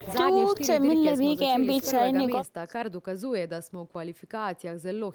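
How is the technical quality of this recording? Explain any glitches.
Nothing stood out on listening to this recording; there were no glitches to explain.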